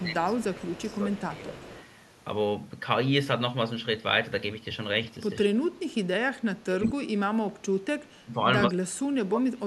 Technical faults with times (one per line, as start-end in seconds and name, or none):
0.00-1.56 speech suppressed in double talk
0.55-1.16 echo leak
1.58-1.85 echo leak
5.43-5.93 speech suppressed in double talk
6.40-7.54 speech suppressed in double talk
7.82-8.40 speech suppressed in double talk
8.68-9.66 speech suppressed in double talk